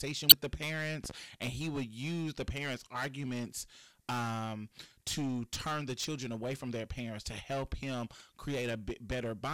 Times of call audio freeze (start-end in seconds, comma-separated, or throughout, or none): none